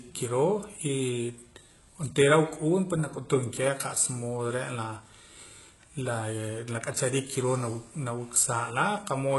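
Throughout the speech, the treble sounds synthetic: s sounds turn gritty and lispy, with a metallic sheen. This is likely HE-AAC compression at a very low bitrate, fitting about 12 kbps. Spectral band replication copies lower bands upward, so a spectrogram shows blocky, repeated treble patches and nothing above 11.5 kHz.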